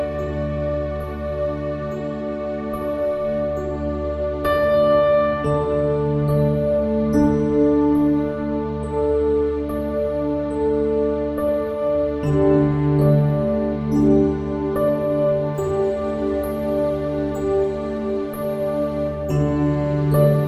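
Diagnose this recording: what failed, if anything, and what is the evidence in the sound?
Pre-emphasis was left on from 15.55 s to the end: the treble jumps about 8 dB at 10 kHz relative to 1 kHz, so the sound turns thin, bright and hissy. That tilt fits the CD 50/15 µs curve, with playback skipping the matching de-emphasis cut.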